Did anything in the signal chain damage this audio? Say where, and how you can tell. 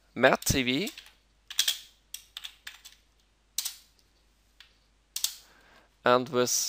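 No, nothing in the signal chain damaged this audio, so there is no point to single out.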